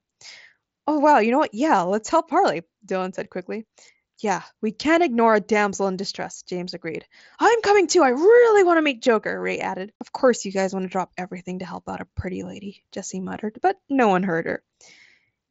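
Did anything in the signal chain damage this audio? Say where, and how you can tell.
No, no stage damaged it.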